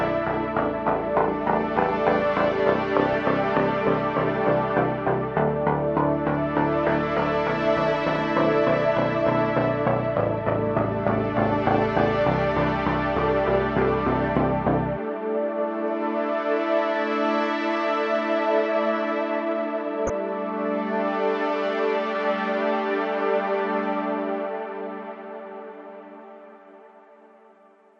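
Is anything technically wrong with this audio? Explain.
Yes, there are two faults.

MP2 compression runs throughout. MPEG Layer II divides the spectrum into 32 equal sub-bands and shares a limited bit budget among them. Here the budget is tight, which fits a rate near 80 kbps, so the upper bands keep dropping out and the remaining ones are coarsely quantised. The result is plainly audible: a dull, band-limited top end with a gurgling, granular texture, likely from low-rate MP2 encoding such as digital radio uses.

DAB burbling occurs at 3.06–3.17 s and again at 20.07–20.15 s. Reception errors have slipped past error correction into the MP2 stream, corrupting samples and scale factors, which points to a low bit error rate of around a tenth of a percent. Individual sub-bands jump in level for up to a frame at a time across several frames. Each burst puts short blips of noise into single sub-bands, laid over the audio.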